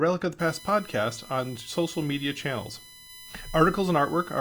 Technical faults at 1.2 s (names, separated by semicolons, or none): USB whine